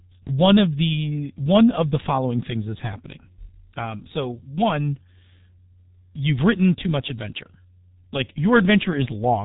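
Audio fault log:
throughout, G.723.1 codec: the speech is muffled and hoarse, with consonants smeared together and nothing heard above 4 kHz. Heavy damage from a low-rate telephony coder running near 6 kbit/s, coding sound in 30 ms frames whose slowly updated voice model cannot follow quick changes.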